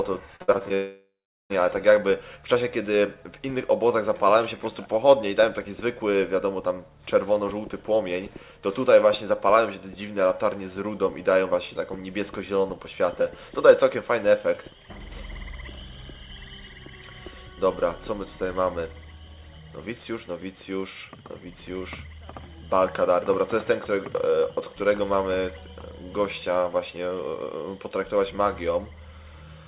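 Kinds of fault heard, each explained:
Repeated packet loss (robotic sound): Short pieces of audio went missing over and over between 0.36 and 0.72 s. There are five gaps, the longest 60 ms, adding up to about 160 ms. The receiver filled each hole by stretching the last bit of sound. About 44 percent of that stretch is patched this way. The result is choppy, with pieces missing. It sits inside audio already limited to 4 kHz, which fits a narrowband G.711 call path.
Long network dropout: From 0.74 to 1.52 s, about 760 ms of audio never arrives. The likely cause is a break in the network stream. At first the receiver carries the last sound forward as a fading buzz. That filler dies away, and the final 400 ms or so is silence. When the audio returns at 1.52 s, the lost part is simply gone. Nothing from that gap is recovered or replayed afterwards.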